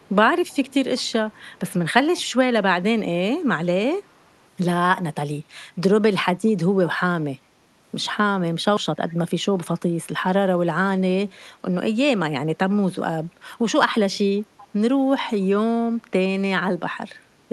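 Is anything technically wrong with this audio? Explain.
Yes. There is an echo leak in the first couple of seconds of this speech, at 0.00–0.09 s, 0.48–0.74 s, 0.96–1.12 s, 1.32–1.73 s and 2.16–2.22 s. In each of these stretches a faint, delayed copy of the voice trails the speech by about 385 ms, sitting roughly 25 to 35 dB below it and loudest near 2.2 s. The likely cause is a far-end loudspeaker whose echo canceller let part of the returned signal through. Reverberation would decay smoothly, but this is a separate repeat at a fixed lag that comes and goes in scraps.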